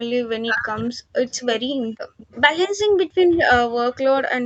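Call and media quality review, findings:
Background gated by the echo canceller, 0.00–2.17 s: canceller clamps the mic hard while the far-end loudspeaker plays. Room sound dips up to about 40 dB, in brief drops totalling roughly a third of a second, recovering once suppression releases.

Speech suppressed in double talk, 0.33 s to end: canceller cannot split near-end talker from loudspeaker echo and attenuates both. Voice dips or breaks up in pieces, deepest drops around 40 dB; overlapping talk is the likely cause.

Echo leak, 0.77 s to end: far-end canceller on a loudspeaker fails to remove all of the mic pickup, returning the residue. Delayed copy of the voice trails by 236 ms, faint, roughly 25 dB under the speech; likely a loudspeaker-side residual. Band stops at 8 kHz, consistent with a wideband Opus call path.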